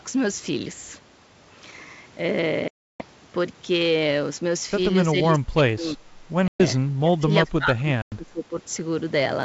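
At 2.68 to 3.04 s the speech breaks into a hard-edged silent hole of about 320 ms, the first instance of packet loss on an ADPCM call. Further holes follow at 6.48 to 6.62 s (120 ms) and 8.02 to 8.14 s (100 ms). Each time the decoder's predictor and step size lose track of the sender's, so the speech resumes with brief, slight distortion. From 5.11 to 6.0 s, and again from 6.74 to 8.55 s, the speech dips by up to roughly 25 dB, dulls and drops out in pieces. This is likely speech suppressed in double talk, with the echo canceller turning down both sides while they overlap.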